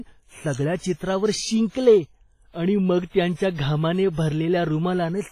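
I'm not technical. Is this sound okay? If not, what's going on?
No. The speech carries a heavy compression fault from start to finish, most likely WMA compression. Squeezing a file into a small size this way throws away detail the encoder judges unimportant. Here it threw away a lot. Words sound washy and ringing, with a hiss that rises and falls as the speech does. The very top of the sound is gone too, with nothing above about 15.4 kHz, so it lacks some airy sparkle.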